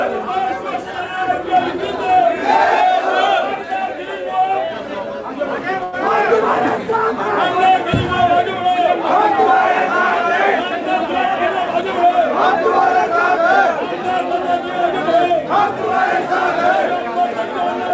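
At 5.84 s there is a short stall from a late packet. A packet arrived late and the jitter buffer ran dry. The receiver held the last sound for 88 ms until the packet came, then carried on. Nothing is lost, but the sound hangs briefly, with a slight buzz or dip.

From 11.00 to 12.47 s, and again from 12.96 to 14.03 s, there is a jitter buffer speed-up. The buffer had built up excess delay. The receiver trimmed small pitch-period pieces repeatedly, running 104% speed at unchanged pitch. Roughly a twentieth of a second goes in the first stretch, slightly less in the second. The G.722 call path leaves nothing above 8 kHz.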